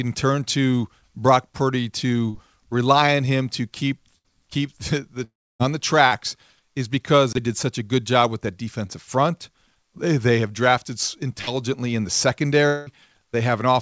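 At 2.30 to 2.36 s there is a short concealed packet loss. About 40 ms of the call failed to reach the decoder, and the receiver extended the preceding sound to cover it before blending back. It comes across as a brief smear rather than a gap. The same thing happens at 6.07 to 6.13 s and, shorter still, at 8.87 to 8.91 s, where only about 20 ms is lost. Nothing fades or drops out in these, which separates them from the longer losses.

At 4.18 to 4.26 s comes a burst of packet loss: roughly 60 ms in a row went missing. The concealment holds the last sound as a buzz or hiss that sags in level before the audio resumes slightly further on. That audible fade and the skipped material mark it as a burst rather than a single-packet patch. It recurs at 11.41 to 11.49 s with the same length.

From 5.24 to 5.61 s there is a long network dropout. Around 360 ms never arrived, likely from the connection stalling. 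The concealed sound fades out, and most of the stretch, about 290 ms, is plain silence before the audio returns past the lost section. The second dropout, at 12.67 to 12.88 s, loses about 200 ms. Here the fading concealment covers the whole gap with no silent stretch, but it lasts far longer than any burst.

Throughout, the call path's G.722 coding leaves nothing above 8 kHz.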